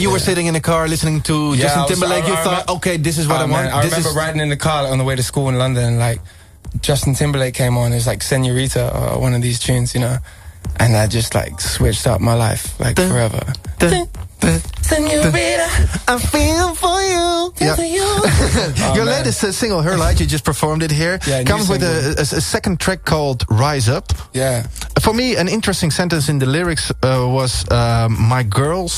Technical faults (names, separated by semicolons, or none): none